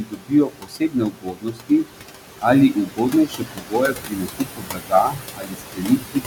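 A speech clip with a noise suppressor working hard the whole way through. The room noise sits about 10 dB under the voice, and the suppressor is pulling that background down by about 18 dB. So it drops away between phrases and swells back in under them. That's classic noise suppressor artifacts: it's deciding band by band, frame by frame, what counts as steady noise, and the gating shows. The other problem is speech cut by the noise suppressor. From the start to 1.99 s, and again from 2.73 s to the end, it mistakes parts of the voice for noise and ducks them by up to about 19 dB. That's roughly a second and a half of affected speech in the first stretch and about three seconds in the second. Quieter consonants and word tails come out swallowed or faint, because they got turned down right along with the background.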